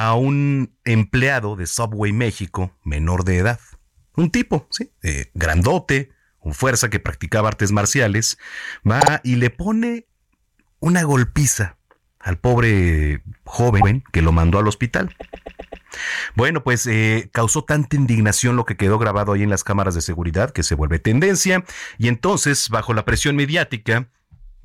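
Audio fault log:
Throughout: hard clipping. The speech is driven about 4 dB past what the chain can pass, so the loudest peaks, around 2 percent of the samples, are sliced flat. Those squared-off tops put a spray of harmonics high into the spectrum, heard as a gritty crackle riding on stressed syllables. On the waveform the peaks sit pressed against a fixed ceiling in flat plateaus, and a spectrogram shows vertical smears of energy reaching well above the speech band at each loud moment.
9.00 to 9.11 s, 13.81 to 13.91 s, 15.19 to 15.85 s: repeated frames. Short runs of coded audio are played again. At 9.00 s a 52 ms block plays twice more, at 13.81 s a 104 ms block repeats once, and at 15.19 s a 131 ms block is played five extra times. Each case is a stutter. On a waveform the identical shapes sit side by side, and a spectrogram shows the same pattern copied in blocks. Together they add about 0.86 s to the clip.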